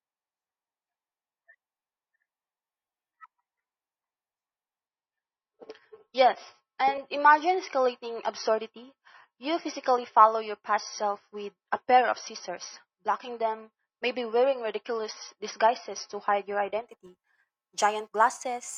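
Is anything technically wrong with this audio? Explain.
Yes. From about 4.87 s to 16.87 s you get an adaptive stream dropping to a lower bitrate. The connection likely slowed, so the player switched to a leaner encode of the same speech. The shift sounds like going from roughly 128 kbit/s MP3 down to something near 24 kbit/s. Everything above 6 kHz vanishes, the speech turns dull and watery with codec artefacts, and the quality snaps back without any gap.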